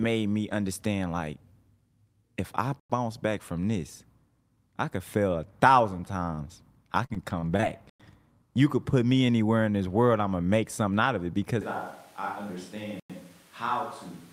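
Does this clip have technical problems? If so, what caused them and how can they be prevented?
Yes. Gaps between chunks: the audio was delivered in 5-second chunks, and each join gets a 100 ms hole of silence, at 2.80, 7.90 and 13.00 s. Starting the next chunk without padding or delay prevents it.

Short stalls from a late packet: packets arrived late and the jitter buffer ran dry. The receiver stretched the last sound, about 35 ms from 6.24 s and about 26 ms at 6.35 s, giving a held, slightly buzzy moment. A deeper jitter buffer prevents this.

Repeated packet loss (robotic sound): from 7.06 to 7.65 s, five gaps were patched by extending the previous sound. The longest was 38 ms, and about a fifth of that stretch was filled in, so the sound turns choppy with pieces missing. A steadier network or forward error correction prevents it.

Switch to a distant microphone: from 11.61 s to the end, the speech turns roomy and hollow, drops by about 10 dB, and room noise sits about 20 dB below it. 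The likely cause is that the close microphone failed and a farther one took over. Checking the close microphone's connection and monitoring its level prevents this.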